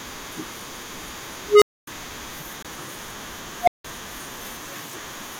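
A speech recording with two bursts from an unstable filter and one CD skip. From 1.46 to 1.87 s a tone of around 400 Hz swells over about 159 ms until it clips, then the output drops to silence for 256 ms. From 3.60 to 3.85 s the same thing happens with a tone near 700 Hz, building in about 70 ms, followed by 171 ms of silence. A recursive filter fed bad coefficients keeps feeding its growing output back into itself until the numbers overflow, and the audio stays dead until the filter resets. On a waveform each burst is an exponentially widening envelope that flattens where it clips, then a flat line. A spectrogram shows a single bright horizontal band at the tone's frequency, ending abruptly in an empty gap.

The CD skip falls between 2.625 and 2.647 s: a mute of about 20 ms, then the speech resumes from a different point. The laser has jumped to another turn of the disc's spiral, so playback continues out of sequence. 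On the waveform this is a brief notch of silence with mismatched material on either side. On a spectrogram it is a narrow vertical gap where the speech patterns fail to line up across the break.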